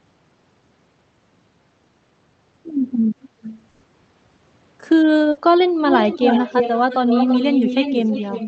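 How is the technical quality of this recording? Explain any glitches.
The recording has two kinds of fault: a delayed copy of the speech in two places, and two short dropouts. The sound is limited to about 8 kHz by the call codec.

Echo leak, from 3.22 to 3.53 s and from 5.86 s to the end: the far end's echo canceller likely let through what its loudspeaker fed into its microphone. A copy of the speech trails about 0.33 s behind, faint at first (about 15 dB down) and then close to full level (about 5 dB down).

Burst of packet loss, at 3.69 to 3.85 s and 5.31 to 5.39 s: consecutive packets arrived too late or not at all. The receiver stretched and faded the last sound over about 140 ms and then 60 ms, giving a held buzz or hiss before the speech resumes with that stretch missing.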